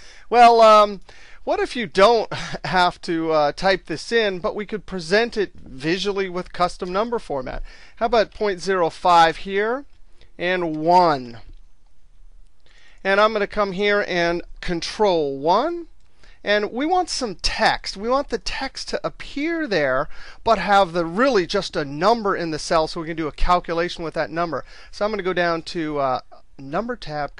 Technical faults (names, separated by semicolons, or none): none